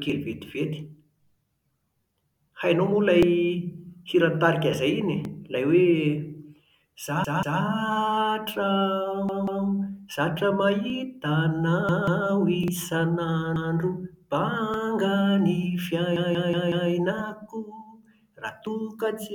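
Repeated buffer: new audio arrived late, so the device replayed its last 186 ms chunk, which fits an 8192-sample buffer. The speech stutters with hard joins at 7.25, 9.29, 11.89, 13.56 and 16.16 s, the last repeating four extra times.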